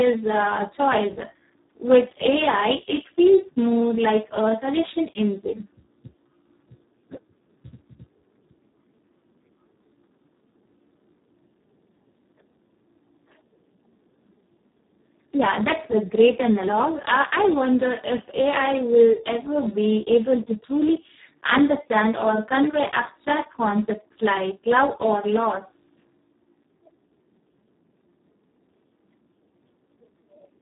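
From start to finish the speech carries heavy Speex codec damage. The coding runs at about 4 kbps, near the floor of this CELP codec, so almost no bits remain to describe the excitation and the result approaches a vocoder. The speech comes out hoarse, noisy and at times robotic. The band is cut off near 3.8 kHz, leaving no content above it, which makes the audio dull and telephone-narrow.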